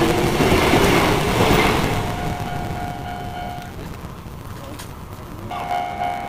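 From start to end a block size mismatch (truncated) runs: each written block, which fits 512 samples, loses its tail, so the audio plays 1.6 times fast at roughly normal pitch with a 138 Hz buzz. Spectrograms show evenly spaced vertical seams; waveforms show regular discontinuities.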